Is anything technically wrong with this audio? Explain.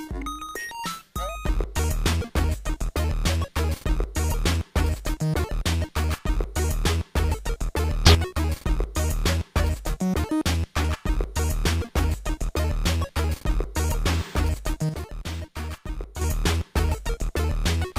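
Yes. There are two sudden gain jumps. From 8.06 to 8.15 s the level rises by about 10 dB, and from 14.89 to 16.21 s it drops by about 8 dB. Both times the sound and background noise shift together, likely from gain applied instantly without a ramp.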